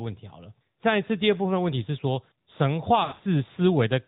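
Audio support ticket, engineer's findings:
AMR narrowband mobile codec, throughout: nothing above 4 kHz, speech buzzy and synthetic from pulse-excited vocal-tract model; damage level fits a mid-rate mode near 10.2 kbps.

Lost AMR speech frames, 3.04–3.21 s: decoder repeating last pitch and filter with falling gain; brief dips and warble, with scattered dropouts across that span.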